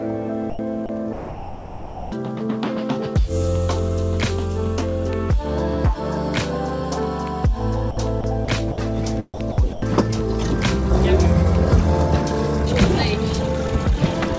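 At 0.50 s the sender's voice detector likely misjudged the signal as background and stopped transmitting, a case of sound dropped by the voice detector. For 90 ms, until 0.59 s, the real sound is gone. Steady synthetic comfort noise stands in for it until the detector triggers again and the audio resumes.

Between 0.86 and 2.12 s, the detector likely toggled repeatedly between sending and muting, so the sound is chopped by the voice detector. About 1.02 s of that stretch is replaced by comfort noise. Fragments of the sound alternate with synthetic hiss.

The same chopping, again likely from detector switching, returns from 7.91 to 8.78 s, with 180 ms replaced, and from 9.34 to 9.82 s, with 210 ms replaced. Each of these shorter stretches leaves two or more holes filled with noise. Throughout, the call path's band limit leaves nothing above 8 kHz.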